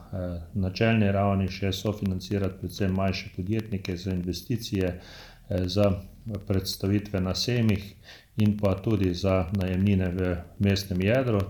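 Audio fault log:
1.48–11.40 s, periodic USB or driver dropouts: steady ticking every 64 ms where a fraction of a millisecond drops to silence, as a background task repeatedly stalls the audio path.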